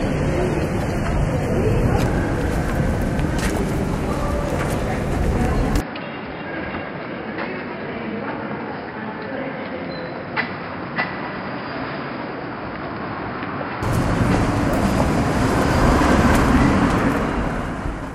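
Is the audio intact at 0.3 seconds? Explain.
No. From 0 to 2.0 s the adaptive stream is starting at a low bitrate, so treble is missing and the spectrogram's top is bare until quality suddenly improves.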